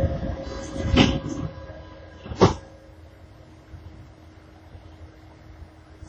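From start to finish the sounds carry heavy transform-codec damage, likely WMA compression at a low bitrate; the smearing fits roughly 32 kbps. Nothing survives above 16.7 kHz, and each event rings and washes across tens of milliseconds as quantisation noise spreads through long blocks, while weak detail drops out entirely. Unlike steady background hiss, the grainy noise here swells and fades with the sound itself, breathing with every onset.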